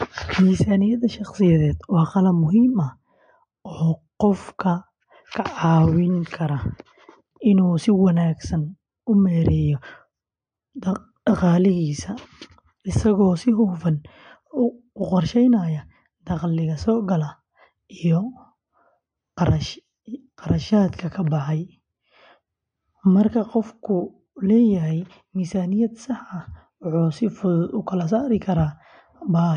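A speech recording, likely squeezed through MP3 compression at a low bitrate, with damage that fits something near 47 kbps. Throughout, nothing survives above 9.8 kHz, and starved frequency lines flicker in and out, leaving s sounds watery and chirpy and blurring consonant attacks.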